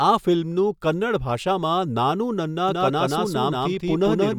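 From 2.69 s, right after "ભાષામાં 'નાનૂ નન્ના", a doubled audio track begins and runs to the end: a second, full-band copy of the speech trails the first by roughly a fifth of a second at about the same loudness, with no decay or room colour. It cuts in abruptly. This is likely a second capture through a slower path. On a spectrogram every syllable pattern appears twice, shifted sideways; the waveform shows overlapping, thickened envelopes.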